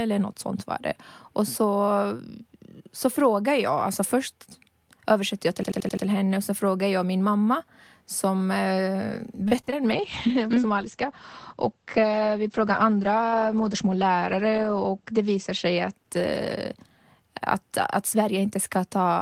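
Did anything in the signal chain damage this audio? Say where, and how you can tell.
Yes, four separate problems, and they sit at different stages.

First, a system hang loop at the driver/buffer level, from 5.63 to 6.06 s, right after "översätter jag" and before "henne och så frågar". One 85 ms slice of audio plays five times back to back, which gives that machine-gun stutter at about 11.7 Hz. The loop length fits a 4096-sample ring buffer. The driver stalled while the hardware kept replaying the same block. Nothing was lost, just repeated.

Second, repeated packet loss with the typical robotic sound, from 9.48 to 9.74 s, so this is the network. You hear four quick holes, the longest about 33 ms, each patched by stretching the previous sound. Roughly a third of that quarter-second is concealment rather than real audio, which is why it turns choppy. About 60 ms of actual signal is missing.

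Third, a call bitrate drop in the codec/call-processing stage, running from 9.92 to 18.69 s. The top end collapses from full-band down to about 8 kHz, so everything goes muffled and a bit watery. The coarseness points to the encoder being pushed from around 48 kbps down to roughly 11 kbps. It sits at its worst for about 4.7 s before easing back.

Finally, a jitter buffer speed-up on the receive side, at 13.48 to 13.96 s, inside that low-bitrate stretch. The audio runs about 7% fast with no change in pitch, so it sounds briefly hurried. The receiver was trimming small pitch-period chunks, a few tens of milliseconds in total, to work off excess buffered delay.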